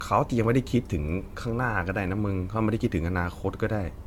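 From start to finish the speech carries generation loss. Nothing sounds above 17 kHz. The tone is swirly, smeared and hollow, and consonant attacks blur. This likely comes from repeated AAC-style encoding, around five passes at what suggests 96 kbit/s, each adding fresh quantisation noise.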